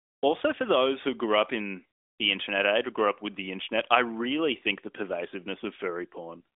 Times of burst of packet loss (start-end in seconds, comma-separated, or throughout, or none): none